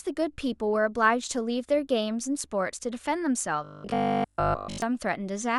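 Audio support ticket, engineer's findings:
Robotic sound from repeated short buffers, 3.64–4.82 s: rigid metallic buzz near 50 Hz, most audio replaced by repeats. Likely receive buffer underrun looping about 20 ms segments.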